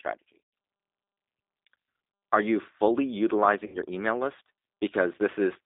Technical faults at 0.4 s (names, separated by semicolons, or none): G.729 codec; VoIP packet loss concealed by the speech codec